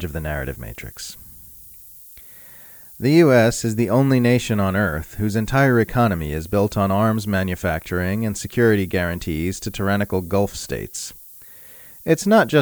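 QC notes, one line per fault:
Throughout: low bit depth with noise shaping. A steady, thin hiss sits about 20 dB below the speech, rising sharply toward the top of the band, which fits roughly 8 bits. The rounding error is pushed upward, so unlike flat background hiss, it stays bright and constant.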